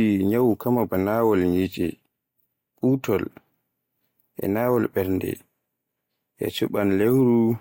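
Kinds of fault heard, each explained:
No technical faults detected.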